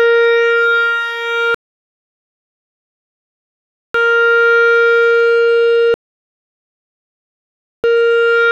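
Music interrupted by two rebuffering stalls, from 1.54 to 3.95 s and from 5.94 to 7.84 s, where playback starved for data and fell silent for about 2.4 s and 1.9 s. Unlike a dropout, the music resumes exactly where it stopped, so nothing is skipped and only time is added.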